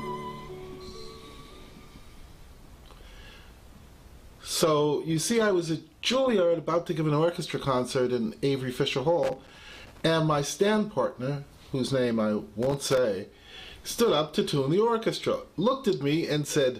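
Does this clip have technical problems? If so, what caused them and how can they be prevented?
Yes. Loose connector crackle appears from 9.23 to 10.01 s and again from 12.62 to 12.98 s: a worn or dirty contact repeatedly breaks and remakes the circuit, chopping the signal into irregular scratchy bursts. Reseating, cleaning or replacing the connector and securing the cable prevents it.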